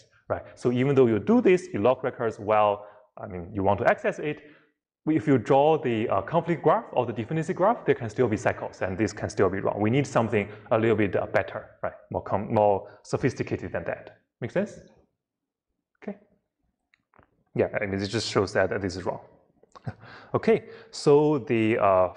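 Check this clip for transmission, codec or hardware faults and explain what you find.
No transmission, codec or hardware faults.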